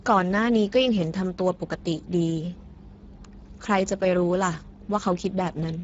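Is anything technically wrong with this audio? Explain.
Yes. Throughout the speech, Speex codec compression at a low setting starves the excitation of bits, which fits a rate near 10 kbps. The speech sounds noisy and hoarse with plainly audible coding damage, and nothing remains above 7.7 kHz.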